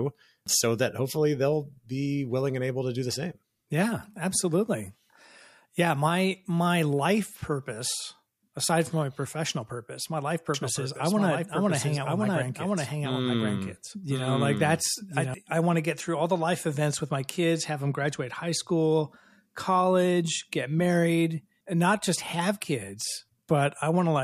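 A doubled audio track runs from 10.54 to 15.34 s, just after "professional purpose my life" and ending before "I want to get". A second copy of the speech trails about a second behind, somewhat quieter, likely from a slower capture path. It starts and stops abruptly, with no reverberant tail.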